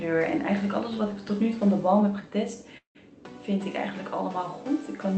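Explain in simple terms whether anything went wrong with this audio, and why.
From 2.77 to 2.97 s the sound blurs into a fading buzz, falls briefly silent, then returns with a piece missing. That is likely a long network dropout.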